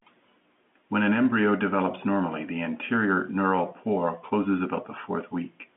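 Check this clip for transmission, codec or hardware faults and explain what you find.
No transmission, codec or hardware faults can be heard in the speech, which carries the narrow telephone band of G.711 A-law coding, roughly 200 Hz to 3.4 kHz with nothing above about 3.7 kHz, consistent with a standard 64 kbps line and at most only a faint trace of its coding noise.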